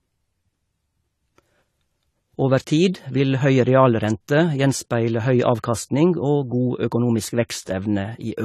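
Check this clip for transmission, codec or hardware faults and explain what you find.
One codec fault runs through the whole speech recording: AAC compression, most likely AAC-LC at a low bitrate, which fits about 32 kbps. Nothing survives above 14.1 kHz, so the sound is dull and smeared, with a warbling, fizzy edge on sibilants. That texture sets it apart from a plain low-pass filter. The coder quantises frequency lines coarsely against a hearing model, so the damage is plainly audible beyond the loss of the top end.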